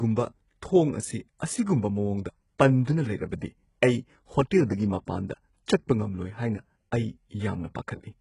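Throughout the speech, the treble has the synthetic, metallic sheen typical of HE-AAC compression at a very low bitrate, in the region of 12 kbps, with heavy codec damage and nothing above 11.1 kHz. The likely mechanism is spectral band replication: the upper band is rebuilt from copied lower bands, so s sounds come out gritty and lispy. A plain low-pass filter would make the sound dull instead, and no such brightness would remain.

From 2.85 to 2.87 s, a short hiss of about 26 ms arrives just ahead of an attack, and the onset itself sounds softened and smeared. This is pre-echo: the transform block containing the attack spread its quantisation noise evenly across its whole length, filling the quiet moment before the attack. Because the hiss comes before the attack rather than after it, it cannot be mistaken for reverb or a delay tail.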